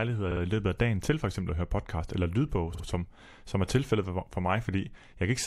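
At 2.73 to 2.84 s, just after "høre podcast eller lydbog", repeated frames cause a stutter. A 52 ms block of compressed speech, which fits two frames, plays twice more, so the same fragment sounds three times in a row and the clip gains about 105 ms.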